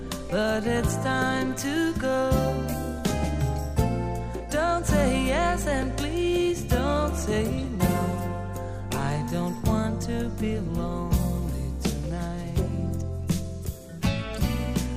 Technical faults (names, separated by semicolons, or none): none